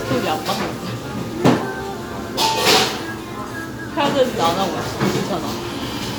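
The signal holds steady throughout, with no technical faults to be heard.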